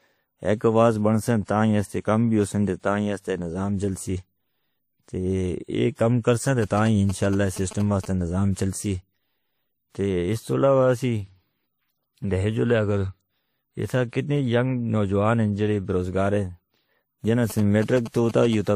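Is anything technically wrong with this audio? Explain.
Yes, there are two problems. Throughout the speech, nothing is present above 15.3 kHz. Smeared, swirly artefacts of more than one character are heard together, most likely from transcoding between lossy codecs: MP3, then WMA, then MP3 again at similar modest bitrates. Each pass encodes the previous one's damage, and the lowest cut-off survives. A single encode would leave only one consistent artefact texture.

GSM signalling bursts occur from 6.62 to 8.06 s, between "کام کرسن" and "سے نظام", and again from 17.50 to 18.55 s. A nearby 2G phone's short radio bursts are rectified by the audio circuit. They sound like galloping ticks and buzzes at 217 Hz, roughly 15 dB below the speech. Unlike steady mains hum, they come in brief intermittent groups.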